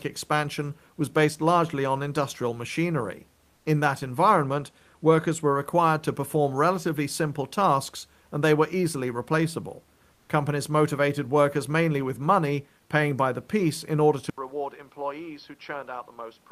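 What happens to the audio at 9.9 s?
Nothing goes wrong at 9.9 s: the speech continues intact, with only the room's background noise sitting far beneath it, about 41 dB below the voice.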